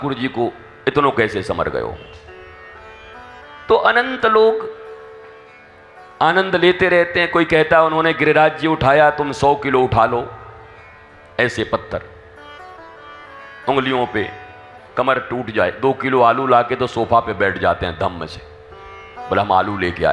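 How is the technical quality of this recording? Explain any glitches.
Nothing here to explain: the recording holds together without a single glitch, so there's no trouble to point to anywhere in it.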